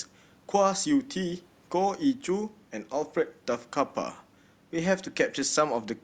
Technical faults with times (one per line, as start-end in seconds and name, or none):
none